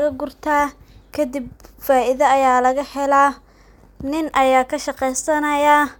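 No technical faults are audible anywhere in the speech recording.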